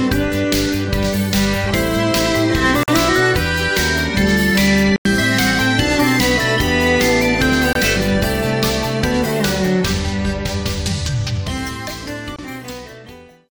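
Silences with abrupt or briefly faded edges at 2.83–2.88, 4.96–5.05, 7.73–7.76 and 12.36–12.39 s, likely a Bluetooth dropout. Unlike a stall, the sound resumes further along, with the gap's audio skipped.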